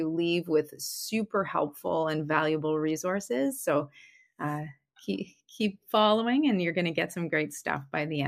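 Speech recording; no technical faults can be heard anywhere.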